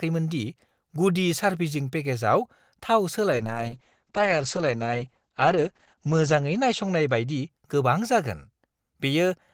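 From 3.33 to 7.77 s, a call bitrate drop leaves the speech rough and muffled, consistent with falling near 9 kbps. The spectrogram shows everything above 8 kHz vanishing.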